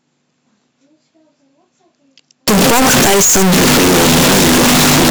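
From 2.48 s to the end, the speech suddenly becomes a blast of harsh, very loud, nearly square-edged sound sitting at an almost fixed, high level, with background noise pushed up as loud as the talking, though pitch can still be followed. This is a float read as integer fault: samples likely written as 32-bit float were read as 32-bit integers, so sign and exponent bits, not the true amplitude, dictate each value.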